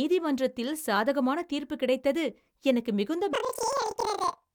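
From 3.33 s to the end of the speech, planar audio read as interleaved: each 46 ms block plays twice at double speed, an octave high with a 21.5 Hz flutter.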